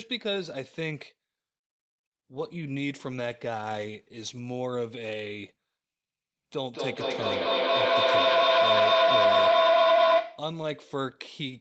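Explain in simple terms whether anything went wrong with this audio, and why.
Feedback howl, from 6.66 to 10.61 s. The sound looped between two devices on the same call, from loudspeaker back into microphone, growing louder on each trip. It narrowed into a tone near 700 Hz, pulsing about every fifth of a second.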